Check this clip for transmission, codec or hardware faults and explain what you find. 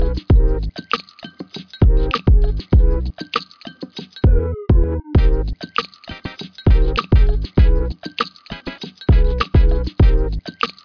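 Nothing stands out here, and I didn't catch anything worth flagging anywhere in the clip.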